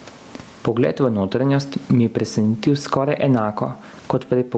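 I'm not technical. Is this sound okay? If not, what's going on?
No. Throughout the speech there's gain pumping: loud and soft parts end up squashed closer together in level. That's likely from the level being set far too high, with a fast limiter repeatedly pulling it back.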